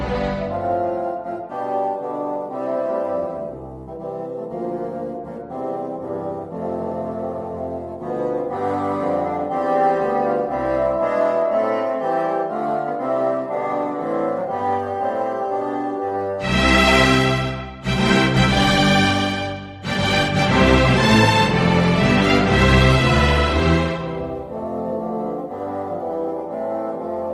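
No technical faults can be heard in the audio, which carries the ordinary coding texture of a working call path, with its high end rolled off at around 12 kHz.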